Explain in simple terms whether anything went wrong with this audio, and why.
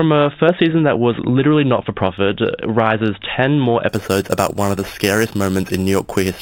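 Something went wrong from 3.89 seconds to the end of the speech. A bright, metallic fizz rides along with the voice there, getting louder and softer with it. This is imaging from sample-and-hold upsampling. Each sample was simply repeated to raise the rate, with no smoothing. That leaves mirror copies of the sound above the real one, here between 4 and 8 kHz. This fits audio that started at 8 kHz.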